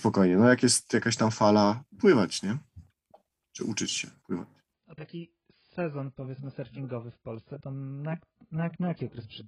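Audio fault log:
4.73–9.48 s: adaptive stream at a lower bitrate. Right after "uczyć się pływać" the speech turns dull and smeared, with nothing above 5.1 kHz. The change is sudden and gapless. It sounds like a switch from about 96 kbit/s AAC to a far lower version after the connection slowed.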